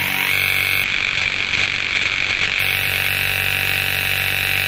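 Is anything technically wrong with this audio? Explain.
Yes. From 0.84 to 2.67 s there is a call bitrate drop, which fits a fall from about 32 to 9 kbps. The encoder codes coarsely and narrows the band from 20 kHz to 8 kHz, so the sound turns rough and muffled, then clears. Unlike a plain low-pass filter, it adds coding roughness.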